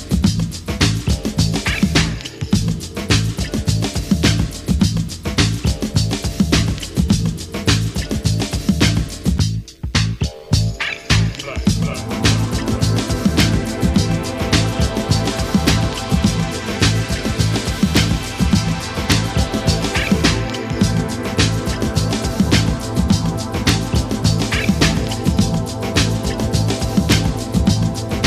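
Integer overflow produces sharp cracks at 13.41, 15.68, 17.97, 19.12, 23.69 and 27.12 s, where peaks reaching the integer limit wrap to the opposite sign instead of being limited. On the waveform each appears as a sudden jump to the opposite extreme; on a spectrogram, a thin broadband vertical line.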